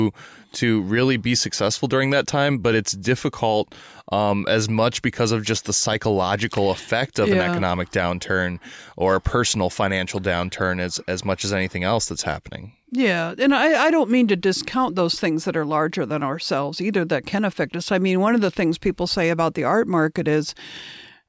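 Nothing in the recording stood out as a technical problem on listening.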